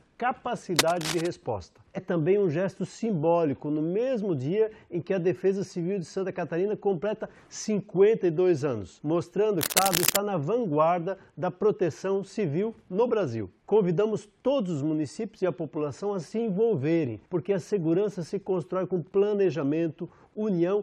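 From 0.76 to 1.27 s a dense, uneven scratching rustles over the sound a little below its level. It returns from 9.59 to 10.17 s, about as loud as the sound itself. This cable scratch noise is likely a worn cable, connector or control being moved, its contact resistance flickering rapidly. A brief glitch occurs from 1.97 to 1.99 s, and another at 9.69 s inside the second scratch. Both come from damaged data in a compressed stream: the decoder misread corrupted frames and jumped to the next valid frame header.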